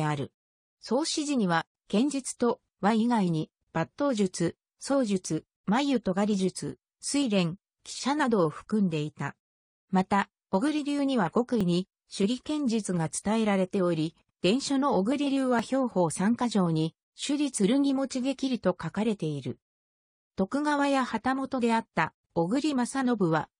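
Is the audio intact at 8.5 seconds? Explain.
Yes, at 8.5 seconds the audio is intact, with no dropout, click, distortion or other fault there.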